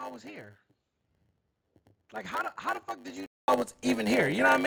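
From the start to 3.48 s the speech is duller and roughly 10 dB quieter, with a narrower band and a faint new noise floor far below the signal, then a 200 ms silence before fuller sound returns. This is likely an input switched to a poorer device, with the narrower-band input active until the switch back.

Throughout, a 100 Hz buzz sits under the speech, which runs at 0.919 of normal speed while keeping its timbre. This is a block size mismatch (padded): each short block is zero-filled to the reader's length, inserting a gap per block.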